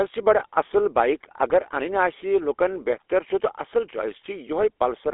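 From start to finish, the speech carries the sound of the GSM full-rate codec, with band limits that sit at roughly 300 Hz to 3.5 kHz, as on a telephone line. The codec models the vocal tract and excites it with a sparse, regularly spaced pulse train, discarding most of the excitation detail at a rate that fits 13 kbps. The damage is plainly audible: a buzzy, gravelly roughness on the voice and a thin, boxy tone with no top end.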